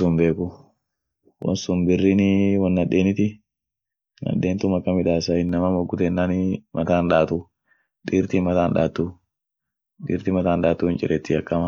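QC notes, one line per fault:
1.42–5.49 s, channel delay (comb filtering): one channel arrives late by roughly 0.4 ms, and when the channels are summed to mono the shared speech cancels at evenly spaced frequencies, starting near 1.5 kHz, leaving a hollow, phasey tone with fixed notches.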